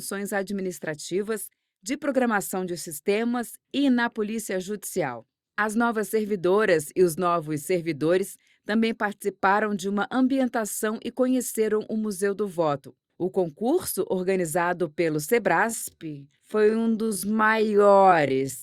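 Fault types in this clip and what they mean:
Time-stretched section: from 15.63 s to the end, the pace abruptly drops to 0.54 times normal speed while pitch holds steady. The sound drags, likely from software lengthening that stretch by repeating short slices to fill a set duration.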